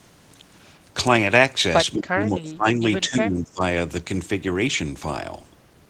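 From 1.94 to 2.82 s the speech sinks sharply, by around 25 dB at its deepest, then dips again more gently from 3.06 to 3.62 s. This is speech suppressed in double talk, likely an echo canceller turning down the talker while the far side spoke.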